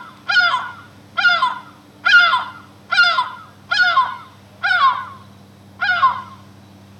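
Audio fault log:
No faults can be heard in this recording of sounds. There is nothing in it to log.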